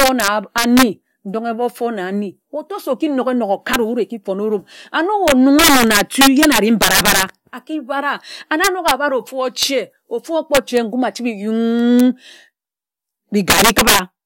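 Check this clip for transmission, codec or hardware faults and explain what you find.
Integer overflow is present at eight points across the clip. Loud peaks push the sample values past the largest integer the format can hold, and instead of being limited they wrap around to the opposite sign. Each excursion becomes a full-scale jump, heard as violent cracks far harsher than clipping. It occurs at 0.00–0.83 s, at 3.74 s after "se oki nok enok", 5.28–7.23 s (about 12 dB over, the worst) just before "aki bara and", 8.64–8.91 s, 9.63 s, 10.55–10.77 s, 12.00 s, and 13.50–13.99 s (about 11 dB over).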